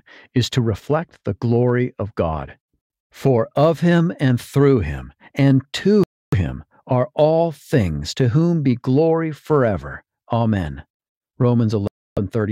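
At 2.81 s the sound cuts abruptly to silence for about 0.09 s, then resumes. Longer gaps of roughly 0.29 s follow at 6.04 to 6.35 s and at 11.87 to 12.18 s. These are likely Bluetooth stalls: radio interference delays packets, the headphones' buffer empties, and playback halts until the retransmissions arrive. Packet-loss concealment fills a gap with smeared or repeated sound, but here each gap is clean, dead silence.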